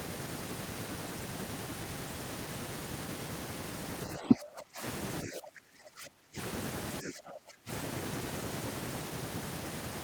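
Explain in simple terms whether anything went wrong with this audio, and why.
Something did go wrong. The speech gets pushed down three times: from 4.17 to 4.82 s, from 5.23 to 6.38 s, and from 7.02 to 7.7 s, dropping steeply each time. That pattern looks like speech suppressed in double talk. Most likely the call's echo canceller heard both ends talking at once, couldn't tell this talker apart from the returning echo, and turned everything down together. The longest gap, lasting about a second, is the middle one.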